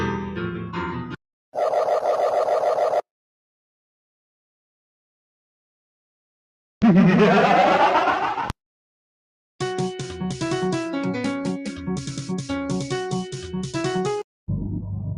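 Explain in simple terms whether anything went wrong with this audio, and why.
Something did go wrong, early on. Between 0.65 and 1.16 seconds, there is sound cut by the noise suppressor. A noise suppressor is meant to quiet background hiss and hum. Here it mistook part of the real sound for noise and turned it down. For most of that half second, the sound drops in level more than the rest of the audio around it. It then returns to its usual level.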